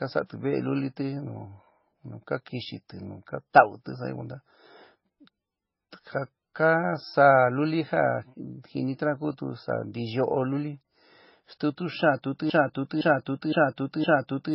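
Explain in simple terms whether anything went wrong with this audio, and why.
The speech sounds muffled and smeared all the way through, with nothing above 5.6 kHz. That's transcoding between lossy codecs, likely from being squeezed by one compressor and then another.

From 12.50 s to the end, a half-second snippet (0.51 s) repeats four times in a row, like a broken-record loop. The player or stream likely stalled, so the audio that belonged there is missing.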